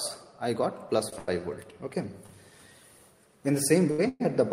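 Four brief held moments break the flow: at 1.09 to 1.14 s, 1.18 to 1.30 s, 2.26 to 2.31 s and 3.91 to 4.00 s, the sound hangs on for 30, 93, 29 and 73 ms respectively, with a faint buzzy, slightly dipping quality before carrying on. Each is a short stall from a late packet. The jitter buffer ran dry, so the receiver stretched the last sound until the packet arrived, then resumed where it left off, with nothing lost.

From 4.08 to 4.22 s there is a longer hold. The last sound smears into a fading buzz for about 115 ms and drops to silence for roughly 10 ms before the audio picks up again at the same point. This is a call audio freeze, likely from packets held up in transit emptying the jitter buffer. The receiver filled the wait with decaying concealment, inserting a gap rather than skipping anything.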